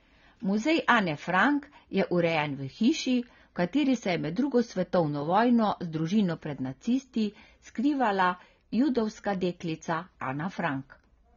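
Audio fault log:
Throughout: AAC compression, heard as dull, smeared speech with a warbling, fizzy edge on sibilants and sustained sounds. The lowered top end and patchy spectrum point to likely AAC-LC coding at a low bitrate near 24 kbps, quantising frequency bands too coarsely.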